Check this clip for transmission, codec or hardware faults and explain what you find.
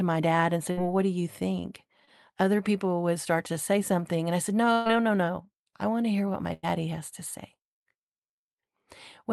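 Packet loss is the culprit here, in two forms, heard over a call path whose top end stops around 12 kHz, which fits an Opus call at roughly 32 kbps.

Burst of packet loss happens three times. The first is at 0.71 to 0.79 s, between "my dad and say" and "what do you think". The second is at 4.73 to 4.87 s, and the third is at 6.53 to 6.65 s, between "to hear what my" and "has to say". Each time, a run of packets arrived too late or not at all, about 60 ms, 120 ms and 100 ms of audio. The receiver stretched the last sound and faded it, so you hear a held buzz or a dying hiss, then the speech jumps ahead with that stretch gone.

Short concealed packet loss shows up at 2.05 to 2.09 s, just after "what do you think". Only about 20 ms went missing, and the decoder patched it by carrying the previous sound forward before blending back into the real signal. It comes across as a brief smear or wobble rather than an obvious gap, though a quick consonant in there could get swallowed.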